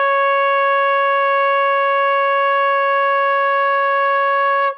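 Nothing technical jumps out anywhere in this bit of music, so there's no fault to point to here.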